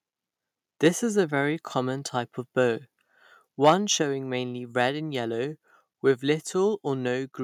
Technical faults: microphone overload; microphone volume stepped down

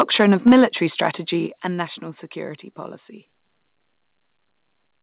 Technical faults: microphone overload; microphone volume stepped down

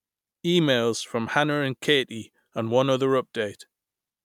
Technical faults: none

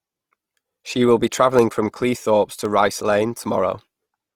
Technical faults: Opus compression

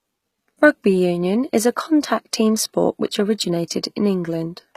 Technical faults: HE-AAC compression

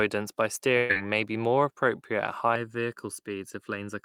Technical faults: burst of packet loss; channel delay (comb filtering)

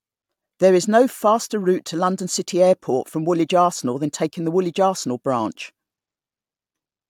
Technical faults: none

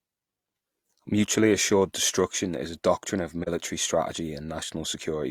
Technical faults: AAC frame loss with muting

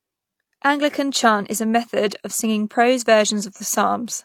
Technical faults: AAC frame loss with concealment

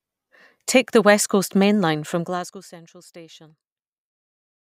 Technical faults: zipper noise

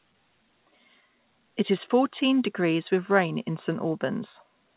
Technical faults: none

